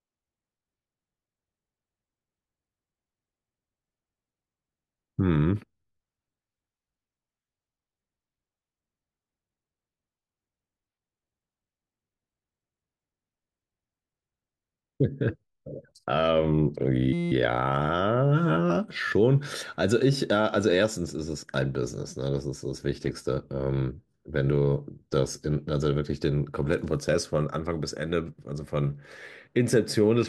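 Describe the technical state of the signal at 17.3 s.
At 17.3 s a system hang loop runs from 17.13 to 17.32 s. A 5.8 ms buffer, which fits a 256-sample buffer, repeats as a steady 172 Hz buzz. The waveform shows identical cycles, and the spectrogram shows evenly spaced harmonic lines.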